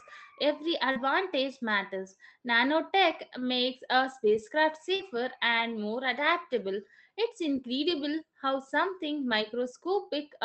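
A speech recording over an Opus call path, band-limited at about 8 kHz, with two instances of short concealed packet loss: 0.91–0.98 s and 4.95–5.02 s, between "makes a spacecraft" and "and more adaptable". In each, about 40 ms never arrived, and the decoder extrapolated the preceding sound before crossfading back, leaving a brief smear.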